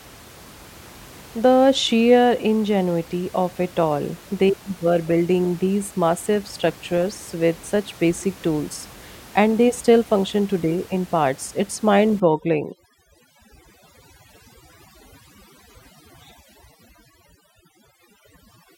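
A speech recording where, from 12.20 s to the end, overdone noise removal sets in: band gates clamp anything near the noise estimate, so the room noise, about 24 dB below speech, drops and breaks up into twinkling specks.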